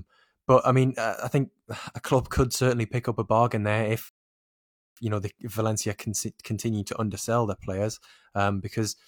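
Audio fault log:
4.09–4.97 s, rebuffering stall. The speech stops dead at 4.09 s and the line goes silent. At 4.97 s it picks up again at exactly the point where it broke off. Nothing is skipped or repeated. The playback simply ran dry: the player had used up all the audio it had downloaded and had to wait for more to arrive. That wait adds about 0.88 s of dead air to the clip without removing any content.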